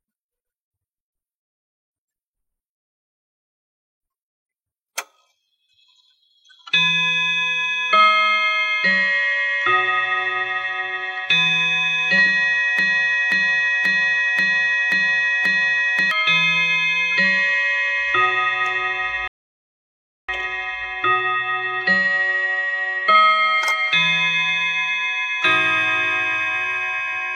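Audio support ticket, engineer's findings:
Broken-record loop, 12.79 to 16.11 s. A 534 ms fragment repeats six times back to back. Likely cause: a stalled player, encoder or stream resending its last held buffer. The audio due in that span is lost.

Rebuffering stall, 19.28 to 20.29 s. Sound cuts to silence for 1.01 s, then resumes exactly where it stopped. The player's download buffer ran dry and waited for data. No audio is lost, but the timeline is longer.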